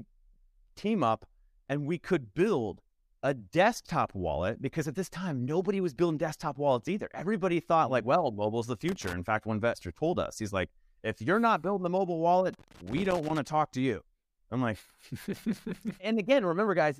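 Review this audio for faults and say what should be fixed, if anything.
A worn or dirty contact is making and breaking as the cable moves, producing loose connector crackle: the signal is chopped into rapid dropouts, heard as irregular scratchy bursts from 8.88 to 9.13 s and again, longer, from 12.53 to 13.46 s. Clean or replace the connector and strain-relieve the cable so it cannot shift during recording.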